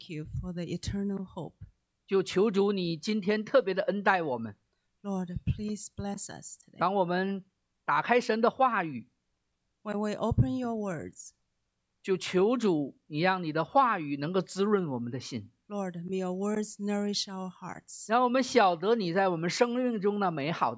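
No technical faults can be heard anywhere.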